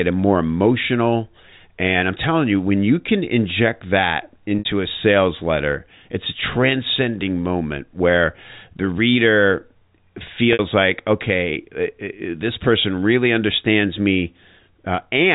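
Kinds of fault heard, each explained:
Packet loss with pitch repetition: twice, at 4.59 and 10.53 s, about 60 ms of sound drops out, which fits two lost packets. The receiver loops the last pitch cycle and fades it over roughly 50 ms, giving a brief buzzy hold before the sound cross-fades back in over the telephone-band audio.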